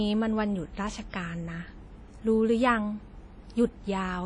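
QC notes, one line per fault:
Throughout: WMA compression, likely. The speech sounds washy and ringing, with a hiss that swells and fades along with it, and nothing above 10.1 kHz. That smearing over tens of milliseconds plus the missing top end fits a low bitrate around 32 kbps.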